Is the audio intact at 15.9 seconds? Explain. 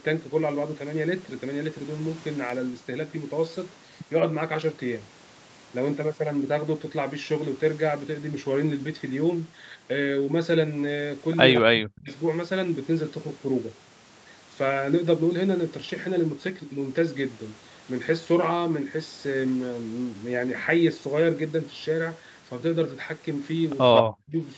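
Yes, the audio is intact at 15.9 seconds, with no dropout, glitch or other fault at that moment.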